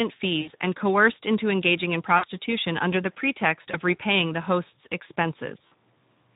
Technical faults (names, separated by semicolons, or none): Speex codec; VoIP packet loss concealed by the speech codec